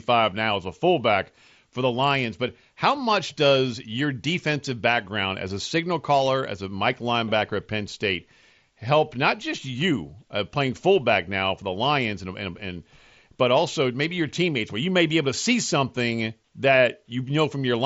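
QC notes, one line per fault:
Nothing stood out on listening to this speech clip.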